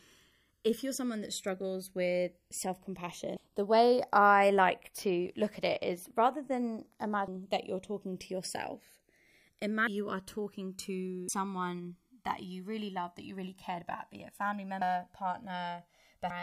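Throughout the speech, the channels drift apart: clocks mismatched by roughly 100 ppm slide the inter-channel delay to about 1.5 ms, so in mono the comb notches sweep as slow flanging.

Compressed frames are skipped at 3.36, 5.26, 7.27, 9.87, 11.28, 14.81 and 16.30 s. Each time the audio jumps ahead by a tenth to half a second, which fits runs of dropped 24 ms frames.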